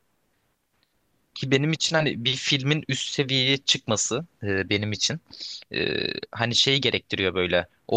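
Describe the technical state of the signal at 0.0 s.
The speech signal at 0.0 s is intact, with no fault present at that moment.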